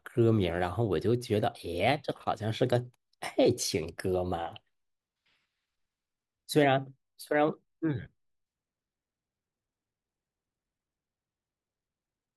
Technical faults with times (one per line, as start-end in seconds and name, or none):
none